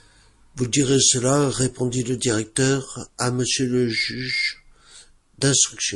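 From start to finish, the speech carries plainly audible damage, likely from MP3 compression. The encoder seems starved of bits. The damage level points to a low rate, something like 48 kbps. Weak frequency detail is dropped and returns from frame to frame. That gives a watery, swirling texture. S sounds turn metallic and chirpy, and attacks smear.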